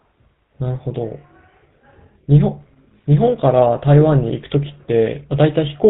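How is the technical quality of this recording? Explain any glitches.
The recording is held back by one fault throughout: GSM full-rate codec damage, plainly audible. The vocal tract is modelled and excited by regularly spaced pulses, consistent with 13 kbps coding, and nothing passes above 4 kHz, leaving the speech band-limited with a buzzy, gravelly roughness.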